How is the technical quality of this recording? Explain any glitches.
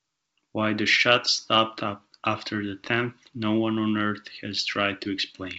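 Nothing stood out on listening; the speech comes through as ordinary wideband telephone audio at 64 kbit/s, with no glitches to explain.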